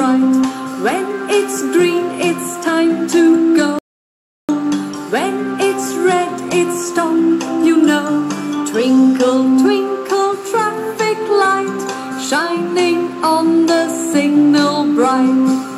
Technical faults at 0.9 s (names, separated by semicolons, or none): none